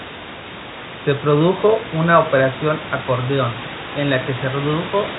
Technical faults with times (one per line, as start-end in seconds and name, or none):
none